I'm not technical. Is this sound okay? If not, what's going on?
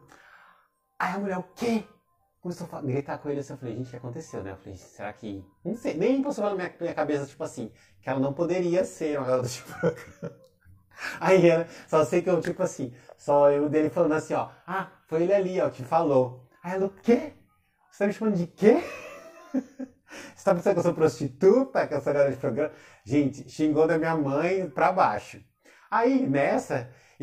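No. Throughout the clip there is channel delay, which causes comb filtering. One side of the stereo arrives about 20 milliseconds late, and when both sides are combined into one, some pitches cancel out. The gaps start down around 20 Hz and repeat up the range, so the sound turns rough and slightly doubled. It isn't an echo, because the delay is too short to hear as a separate repeat.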